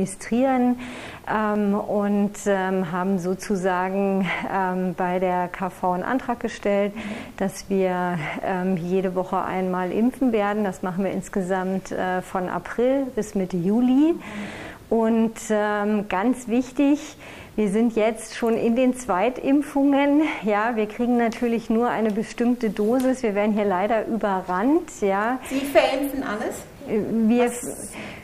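A single sharp click sounds at 1.56 s and again at 18.96 s, each a thin vertical line across the spectrum. These are likely dropped samples: a fraction of a millisecond goes missing, so the waveform jumps abruptly without removing any audible sound.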